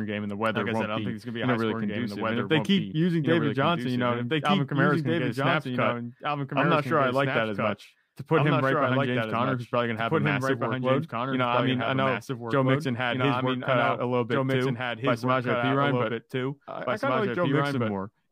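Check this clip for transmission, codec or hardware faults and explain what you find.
One fault runs through the whole recording, a doubled audio track. Every stretch of speech returns about two seconds later as a second full-band copy, roughly 5 dB quieter, dry and without any decay or room colour, so it sounds like a flat, late echo layered over the live talk. The likely cause is the same signal being captured again by a slower path and mixed back in at a fixed offset.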